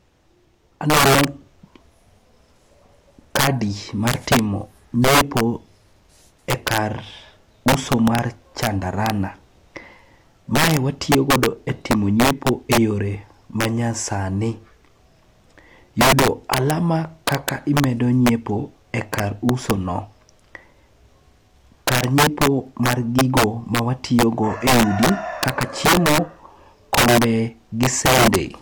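Integer overflow throughout the speech: with about 10 dB too much gain, a small fraction of peaks wrap to the opposite sign instead of limiting, producing violent cracks.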